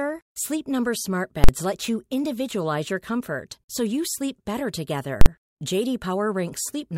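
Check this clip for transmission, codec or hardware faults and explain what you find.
Two short loud bursts interrupt the speech, both the same fault, invalid numbers at full scale. The first runs from 1.44 to 1.49 s, just before "let you individualize your". The second runs from 5.21 to 5.26 s, just after "so you sleep better". Each is heard as a hard, very loud bang replacing the sound for about 46 ms. A calculation produced infinite or invalid values, which were pinned to the maximum output level for one processing block, which fits a 2048-sample block.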